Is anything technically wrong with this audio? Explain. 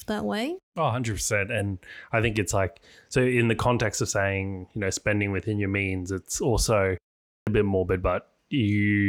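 Yes. At 7.37 s, after "your means it's also" and a pause of about 0.39 s, the speech comes back abruptly, with its opening sound missing just before "bit morbid." Roughly 99 ms is lost, through 7.47 s. This is a clipped start after a pause. The output device drops into a sleep state during the silence and needs time to wake or relock, so the first stretch of sound after the gap never reaches the listener.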